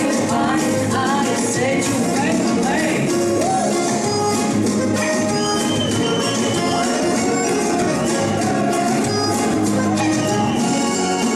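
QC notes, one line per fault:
Nothing stood out on listening to this audio.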